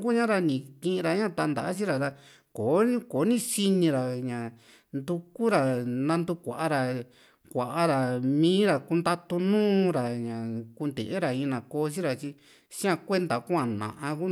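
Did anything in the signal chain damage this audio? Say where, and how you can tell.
No, nothing in the signal chain audibly damaged it.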